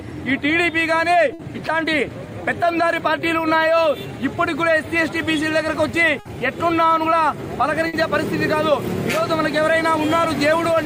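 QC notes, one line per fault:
1.33–1.42, 6.19–6.28 and 7.87–7.96 s: burst of packet loss. Each time the last sound is stretched and faded for about 60 ms, then the audio jumps ahead with about 60 ms gone. That smoothed fill and skipped content distinguish it from a hard dropout to silence.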